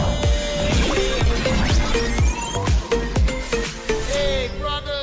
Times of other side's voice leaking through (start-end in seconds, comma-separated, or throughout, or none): none